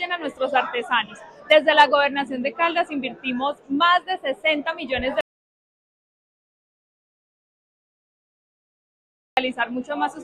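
A single audio dropout to silence runs from 5.21 s to 9.37 s. The sound cuts off mid-flow into about 4.2 s of silence with no room tone, then resumes abruptly. That gap points to the input being lost while recording continued, likely a disconnected device, failed link or stray mute.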